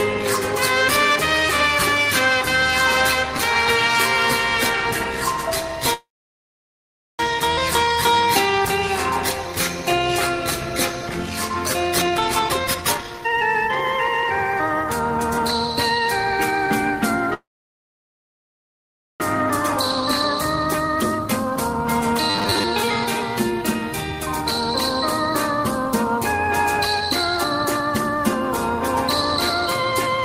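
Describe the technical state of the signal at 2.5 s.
No fault can be heard at 2.5 s, and the signal there is intact.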